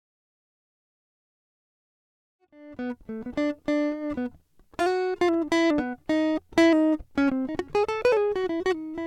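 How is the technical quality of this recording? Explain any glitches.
Nothing here sounds like a glitch; the music just eases in with a gentle fade that begins around 2.5 s and reaches full level by about 3.3 s, with no click or hard edge.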